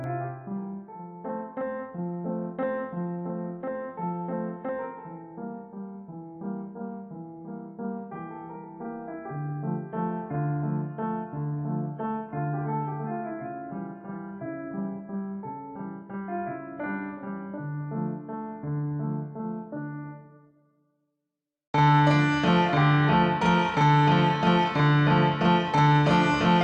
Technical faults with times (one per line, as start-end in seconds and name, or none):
0.00-26.63 channel delay (doubling)
11.15-15.15 adaptive stream at a lower bitrate